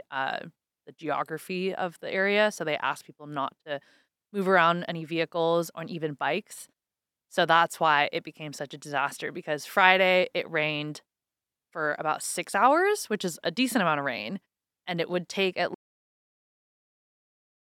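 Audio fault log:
15.74 s to 17.69 s, cut-off end: the speech stops abruptly right after "it would take at", mid-sound, and drops straight to digital silence with no natural decay. The final buffers were never written or played back, so the remaining audio is simply missing.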